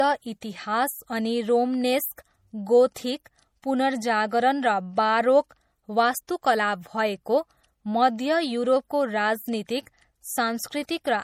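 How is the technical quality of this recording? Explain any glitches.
The quality is limited by one fault that runs through the whole recording.

Low-bitrate audio saved at a high bitrate, throughout: the speech carries the smeared, swirly artefacts of heavy MP3 compression, likely from an earlier low-bitrate encode, around 48 kbit/s, later re-saved near 192 kbit/s. The larger file cannot restore the lost detail. The content stops at about 20.7 kHz.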